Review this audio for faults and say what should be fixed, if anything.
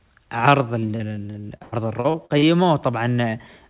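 Repeated packet loss (robotic sound) runs from 0.80 s to 2.44 s. About a dozen holes open up in quick succession, the longest around 97 ms, and each one is filled by stretching out the last received sound. That gives roughly 441 ms of synthetic fill against 460 ms of missing audio, so about 27% of the stretch is concealment. The speech turns choppy, and its band already stops at 4 kHz through the G.711 call path. To prevent it, fix the network loss or jitter on this link, and consider adding FEC or a deeper jitter buffer.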